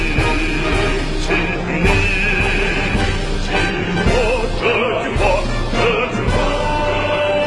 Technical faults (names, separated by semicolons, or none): none